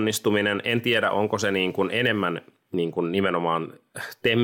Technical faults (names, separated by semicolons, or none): none